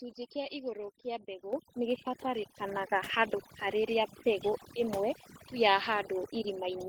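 Speech runs through overdone noise removal for its whole length: a noise reducer set too hard pulls individual frequency bands down or out whenever they sit near its noise estimate, so the background drops and breaks up into twinkling specks, and the voice's quieter components are removed along with the noise. The microphone volume is stepped up twice, at 1.53 s by about 8 dB and at 2.55 s by about 4 dB, each time in a single jump, as the call software raises the device input level; voice and background get louder together at each step.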